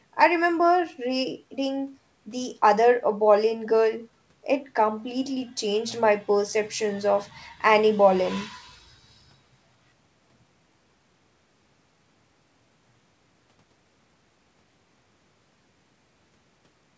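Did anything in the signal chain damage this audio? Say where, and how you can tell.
No, nothing damaged it.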